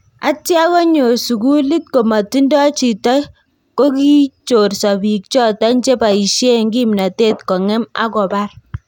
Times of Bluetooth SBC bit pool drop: none

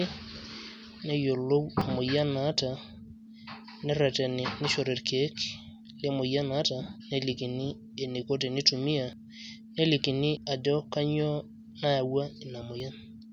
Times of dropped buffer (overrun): 1.81, 9.13, 10.37, 12.80

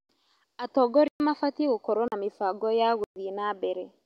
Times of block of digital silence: 1.08-1.20, 2.08-2.12, 3.04-3.16

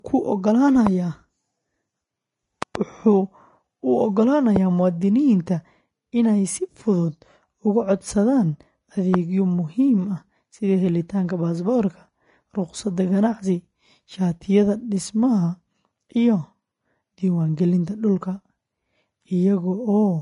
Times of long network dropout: none

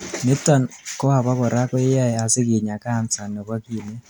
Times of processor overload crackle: none

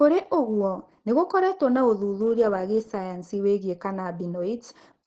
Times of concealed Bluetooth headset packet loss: none

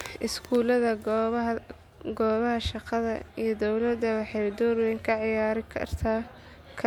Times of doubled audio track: none

